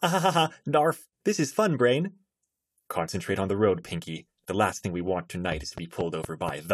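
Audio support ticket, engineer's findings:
Train of clicks, 5.52 to 6.50 s, right after "last thing we want". Around five near-identical ticks at a regular 4.1 per second, about 10 dB above the speech. Likely nearby interference or a faulty connection or power supply injecting a repeated pulse.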